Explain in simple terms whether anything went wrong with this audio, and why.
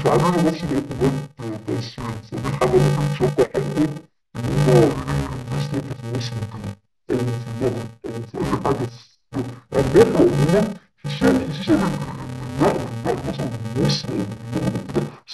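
Interleaved audio read as planar runs the whole clip: left and right get scrambled in tiny 2.9 ms chunks, making the speech dull and robotic with a steady 345 Hz buzz.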